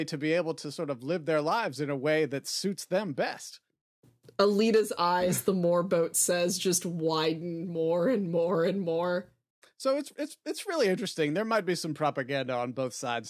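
Nothing to flag in this bit of speech: no technical faults turn up anywhere in it.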